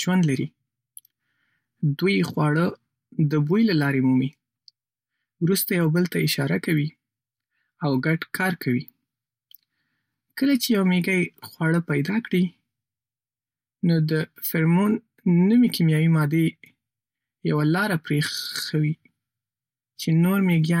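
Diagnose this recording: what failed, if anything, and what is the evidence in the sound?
Nothing failed; no fault is audible in the speech.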